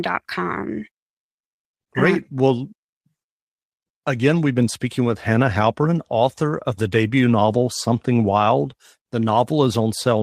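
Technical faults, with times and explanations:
No technical faults are audible anywhere in the recording.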